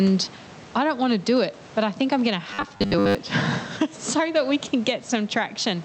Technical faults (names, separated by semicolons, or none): gain pumping; robotic sound from repeated short buffers